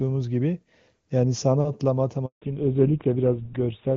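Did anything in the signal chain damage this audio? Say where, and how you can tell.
Yes. At the network stage there is a handover gap from 2.26 to 2.42 s: the speech cuts off quickly and 160 ms of dead silence follows while the call switches links. Unlike packet-loss concealment, nothing is smeared or repeated. No speech frames arrive.

At the codec stage, a fallback to narrowband begins at 2.42 s and lasts to the end. Before the gap, the wideband sound fits HD Voice at its top rate. Afterwards nothing above 4 kHz remains, and the voice turns dull and rough, which points to GSM full rate rather than a simple low-pass filter.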